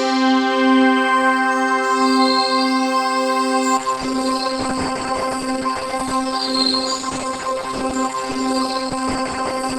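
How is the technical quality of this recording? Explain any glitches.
The quality falls partway through because of one fault. Adaptive stream at a lower bitrate, from 3.77 s to the end at 9.78 s: the player switched mid-stream to a cheaper version of the same audio, likely because the connection slowed. The change is abrupt and leaves no gap. Above 12.1 kHz nothing remains, and codec artefacts grow, which fits a step down from about 64 to 16 kbit/s Opus.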